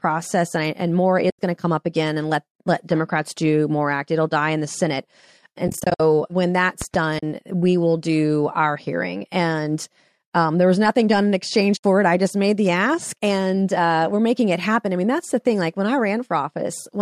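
At 1.30 s, just before "going to come up", AAC frame loss with muting cuts a soft-edged 90 ms hole, which fits about nine lost 10 ms frames zeroed by the decoder. Further holes follow: 180 ms scattered across 320 ms from 5.68 s to 6.00 s (longest run roughly 70 ms), 40 ms at 7.19 s, and 70 ms at 11.77 s, between "nothing done in exchange" and "it I just made". The overlapping windows fade each gap in and out, so the waveform tapers to flat silence and the spectrogram shows blank vertical columns spanning every frequency. The speech runs through light low-delay AAC coding, likely AAC-ELD at 64 kbps.

Between 6.82 s and 6.97 s, right before "we will do our", a loud pop strikes twice, about 10 dB above the speech, which continues underneath. The cause is likely a sudden voltage pulse, such as from a plug or switch. On the waveform these appear as two tall spikes, and on the spectrogram as thin broadband vertical lines.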